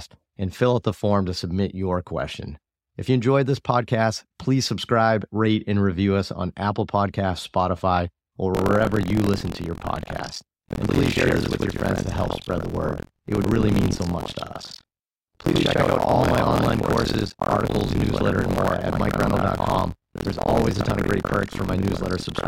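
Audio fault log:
8.55 to 22.48 s, buffer tearing: from here to the end the speech picks up a steady robotic rattle at about 43 Hz, which fits a 1024-sample buffer. Writer and reader have slipped, so most of each buffer replays audio roughly a tenth of a second old, with hard joins.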